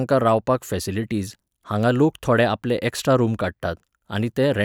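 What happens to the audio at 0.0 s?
Nothing goes wrong at 0.0 s; the audio is intact at that moment.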